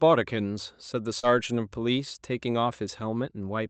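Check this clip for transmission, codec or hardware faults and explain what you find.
One transmission fault stands out in this speech: a short concealed packet loss between 1.19 and 1.26 s. The call audio tops out near 8 kHz, as Opus does at that bandwidth. About 40 ms of packets failed to reach the decoder in time, so the receiver synthesised roughly 37 ms by extending the preceding sound, then crossfaded back into real audio. It is heard as a brief smeared wobble. On a spectrogram, the spectrum runs flat across the gap, and the waveform shows an oddly uniform stretch before normal detail resumes.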